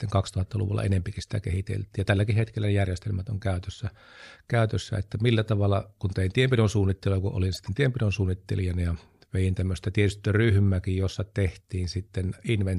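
A speech clip with one corrupt frame decoded, from 7.55 to 7.68 s, between "tienpidon suunnittelua kun olin" and "tienpidon suunnittelijana ja vein". For about 0.13 s, spanning a handful of codec frames, a low-level glitch of misplaced energy peaking around -35 dBFS appears. Damaged bits made the decoder misread gains and codes and place energy at wrong frequencies. Unlike a dropout, which falls silent or is smoothed over by concealment, this adds foreign energy lasting about as long as the damaged frames.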